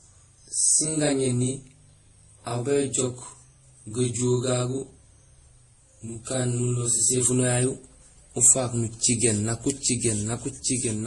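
A speech clip with two audible faults. From the start to 7.25 s, every syllable has a second copy 40 ms behind it, at the same level. It sounds like a tight doubling or slap echo. This is channel delay (doubling). One channel ran late by a long buffer, and the two channels were then summed to mono. After 7.25 s the doubling stops.

Throughout, several kinds of coding damage seem stacked together. Nothing is present above 12 kHz. The likely cause is transcoding between lossy codecs. The pattern fits a chain of roughly 30 kbit/s Vorbis, then 48 kbit/s MP3, then 48 kbit/s Opus. Each later codec spent bits re-encoding the earlier artefacts and added its own. The lowest cut-off in the chain remained.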